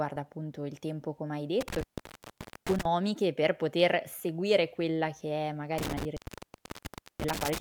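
Speech clip with an intermittent contact fault, twice: from 1.61 to 2.85 s and from 5.78 to 7.58 s. A loose plug or cable briefly opens the line, so the sound drops out for about 0.84 s and 1.03 s, with crackle at each break and faint hiss while the line is open.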